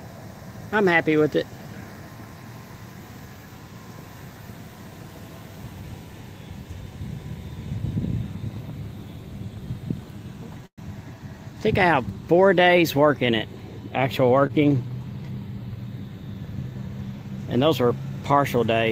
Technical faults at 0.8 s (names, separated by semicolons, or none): none